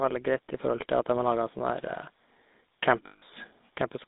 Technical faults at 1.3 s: GSM full-rate codec

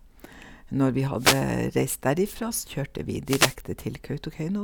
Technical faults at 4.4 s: none

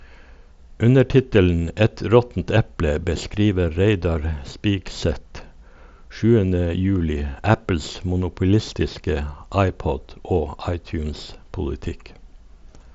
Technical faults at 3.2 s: none

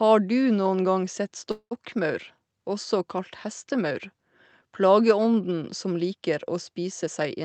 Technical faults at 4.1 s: none

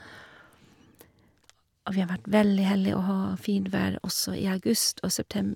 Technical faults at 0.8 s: none

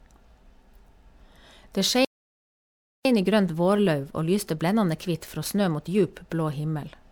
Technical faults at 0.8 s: generation loss

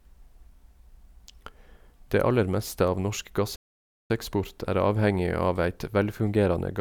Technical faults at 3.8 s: playback stall

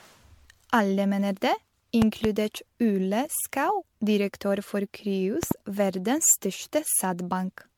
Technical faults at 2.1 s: generation loss; loud pop

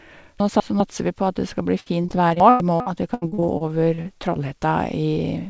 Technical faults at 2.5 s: repeated packet loss (robotic sound); chunks out of order

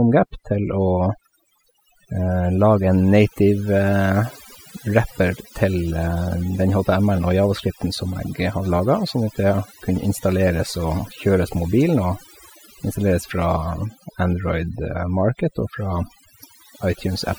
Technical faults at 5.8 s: overdone noise removal

